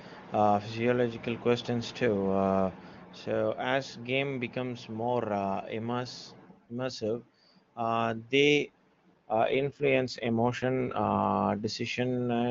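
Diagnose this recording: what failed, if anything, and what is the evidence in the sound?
From 9.13 s to 11.24 s the speech turns rough, buzzy and more synthetic, then clears again. The band stays just as wide and nothing drops out, which points to an AMR rate drop at the network and codec stage. The clean AMR-WB sound before and after fits 23.85 kbit/s. Across those two seconds the link had the encoder step down, apparently to 8.85 kbit/s, trading speech detail for error protection until the rate recovered.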